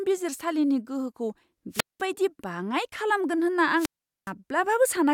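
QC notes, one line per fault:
1.72–2.03 s and 3.76–4.32 s: wireless microphone squelch dropout, just after "बिजिरसालिनि गोहोखौ" and later. The fading RF carrier brings a brief hiss swell, then the squelch mutes for 197 ms and 415 ms. On the waveform these are flat gaps, and on the spectrogram blank columns edged by broadband noise.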